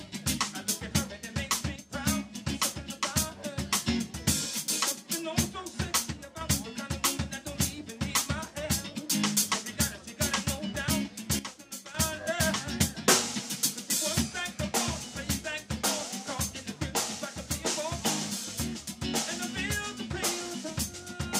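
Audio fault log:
1.76–1.92 s, 6.10–6.41 s, 11.39–11.95 s: sudden gain jump. Level drops abruptly by about 6 dB, 6 dB and 10 dB, then snaps back, with the background noise falling and returning with it. This is likely a digital gain step applied between adjacent samples with no ramp.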